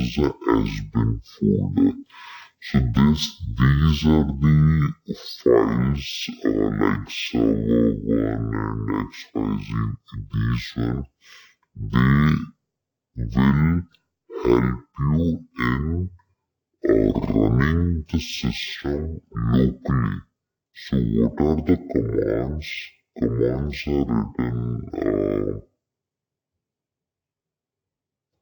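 The whole clip plays at half speed and an octave low, exactly 12 semitones down. This is stereo read as mono: interleaved left and right samples were taken as one channel.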